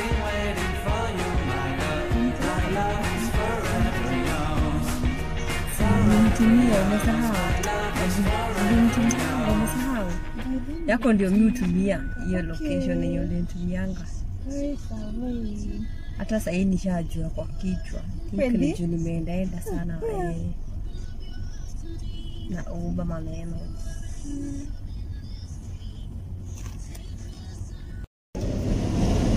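No faults detected anywhere in the audio.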